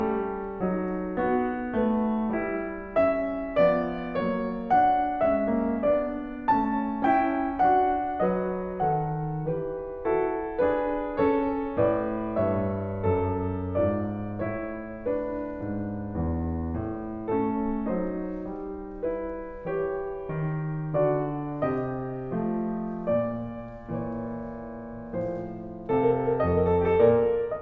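Nothing in the music stood out as a technical problem on listening.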